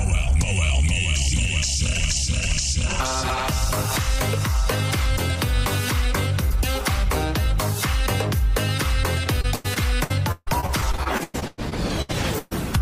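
From 9.41 to 12.53 s there's repeated packet loss (robotic sound): about twenty short holes, up to 148 ms, patched by stretching the last sound, so it turns choppy with pieces missing.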